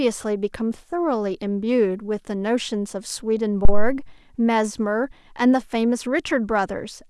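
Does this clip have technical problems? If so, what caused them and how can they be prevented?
Yes. At 3.65 s there is a phantom power thump: a deep thud peaking at about -2 dBFS, decaying over about 80 ms, with the disturbance lasting until 4.01 s. The supply switching on a live input sends a voltage step through the coupling capacitors. Unlike handling noise, it is a single smooth low-frequency pulse with no rubbing or rattle. To prevent it, mute the channel or pull its fader down before switching phantom power on or off.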